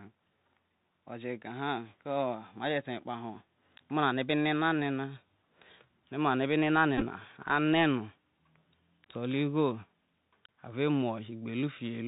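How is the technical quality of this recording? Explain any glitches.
The recording has a narrow, band-limited headset sound throughout, with one short buzzy glitch near the middle.

Bluetooth CVSD headset codec, whole clip: The speech sounds thin and boxed-in, with nothing above 4 kHz. A fine granular hiss sits under it, s sounds are scratchy, and loud bright moments rasp. This fits a 64 kbps CVSD link. CVSD sends one bit per sample, only up or down, with an adapting step size. When the sound changes faster than the step can follow, the waveform lags and distorts.

Bluetooth headset packet repeated, 6.98 to 7.03 s: A brief rough buzz breaks in, lasting about 26 ms in total but spread over roughly 37 ms, which fits around seven lost headset packets. The chip filled each gap by decoding the previous packet's bits again. Because each repeat lands every 3.75 ms, the longest stretch, around 15 ms, produces a steady buzz near 267 Hz before normal packets resume.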